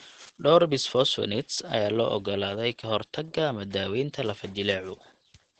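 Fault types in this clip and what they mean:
Opus voice compression: the speech runs through Opus's SILK coder at a bitrate that fits about 12 kbps, so it sounds plainly muffled, hoarse and faintly robotic. A spectrogram shows nothing above 8.9 kHz and smeared harmonics in blocks that fit 20 ms frames.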